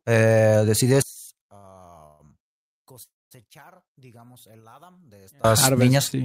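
From 1.02 to 5.44 s the speech drops by about 29 dB in mono. One channel is likely inverted, so the shared centre cancels.

From 1.27 to 1.75 s, repeated stalls (stutter) break the speech five times. About 117 ms is stretched out, with gaps up to 60 ms. The flow drags and catches.

At 2.06 s a call audio freeze holds the last sound as a fading buzz or hiss for about 133 ms. At 3.03 s another freeze bridges 280 ms, most of it silent. Both likely come from late packets, and speech resumes where it stopped.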